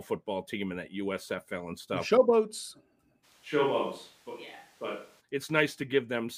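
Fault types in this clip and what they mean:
Switch to a distant microphone: from 3.25 to 5.19 s the speech turns roomy and hollow, loses bass and drops about 5 dB, likely from a far microphone.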